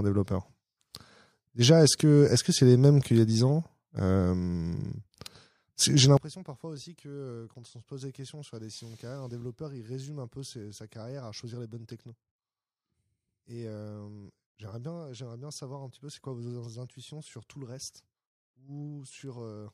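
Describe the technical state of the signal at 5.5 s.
At 5.5 s the speech signal is intact, with no dropout, clipping, glitch or other technical fault to be heard at that moment.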